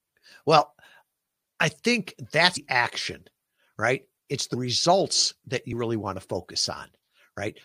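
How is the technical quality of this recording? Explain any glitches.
The recording has three audible dropouts where the speech jumps forward.

Between 2.56 and 2.58 s, after "I think" and before "action right", about a fifth of a second vanishes. Shorter jumps follow at 4.53 s, before "results that" (roughly 50 ms lost), and at 5.71 s, between "results that" and "really want to" (a frame's worth, roughly 20 ms). These are compressed frames skipped: the decoder dropped whole frames, which fits a 23.2 ms frame length.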